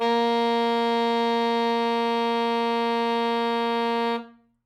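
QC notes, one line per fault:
No faults to flag on this music clip, nothing here needs a second listen.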